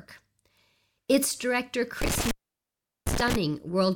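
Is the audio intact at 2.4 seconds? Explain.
No. Intermittent contact, 2.02 to 3.36 s: a loose connection opens for 0.75 s, dropping the speech out with crackling edges and faint hiss.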